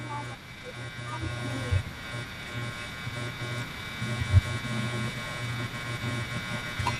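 MP2 compression artefacts run through the whole clip: the speech sounds dull and carries a gurgling, granular roughness from start to finish. This is likely Layer II coding starved of bits, with a character that fits a rate near 80 kbps. The coder divides the spectrum into 32 equal sub-bands and shares out its bits among them. Short of bits, it shuts off upper bands as they flicker in and out and quantises the remaining bands coarsely.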